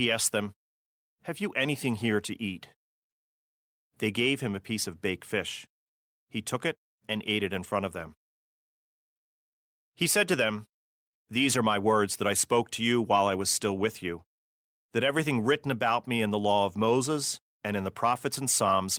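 Nothing in this speech recording stands out as technically wrong.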